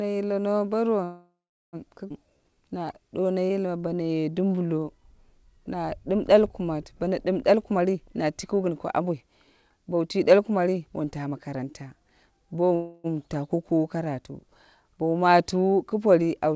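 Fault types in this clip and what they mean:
Call audio freeze: From 1.04 to 1.76 s the speech stops and is filled for about 0.69 s. The last sound carries on as a fading buzz and then goes silent for about 0.38 s. A shorter fill of about 0.29 s follows at 12.75 to 13.07 s with no silent stretch. In both places the speech resumes where it stopped and nothing is lost, which points to packets likely held up in transit while the jitter buffer ran empty.
Skip ahead: At about 2.09 to 2.13 s playback jumps forward with only a 10 ms fill. Roughly 0.4 s of speech is gone, and the material on either side of the jump is joined almost directly. This is consistent with a stretch of audio being dropped while later audio was already queued, which pulls the playout delay back down by a similar amount after the earlier freeze.
Jitter buffer slow-down: From 2.26 to 5.16 s the speech runs at 88% speed with its pitch unchanged, and sounds are audibly drawn out. 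Across that stretch the receiver adds about 348 ms by repeating single pitch periods and pieces of pauses many times over. This is the buffer rebuilding its reserve after the skip. The G.722 path at 64 kbps, which cuts everything above 8 kHz, is working normally here.
Jitter buffer speed-up: From 7.50 to 12.72 s the speech plays at 112% speed with the pitch held, so it comes across as hurried. Roughly 0.7 s is cut out in total, in many short deletions of one or a few pitch periods each. The buffer is holding more audio than its target and is trimming the excess to reduce the delay. The freeze at 12.75 s follows directly after this stretch ends.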